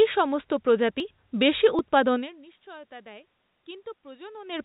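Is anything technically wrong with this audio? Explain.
Yes. At 1.0 s and again at 1.79 s the speech skips forward, and no gap of silence separates the two sides. This sounds like a dropped buffer (overrun). The likely cause is that the capture side didn't read its samples before the hardware overwrote them, so a piece of audio vanished and the edges were butted together. The first jump loses around 30 ms. The second is shorter, about 10 ms.

From 2.15 s to the end, the automatic gain is rising. The input level fell by about 24 dB, so the AGC judged the signal too quiet and slowly wound its gain back up. Voice and room noise swell together over more than a second, instead of the level settling straight away. You can hear it as a gradual bloom in both speech and background. Nearby movement at the microphone, around 2 s and 4.5 s, also changes the level. The whole thing runs through a G.711 mu-law call path at 64 kbps, so there's nothing above 4 kHz and the sound has a slightly grainy telephone edge.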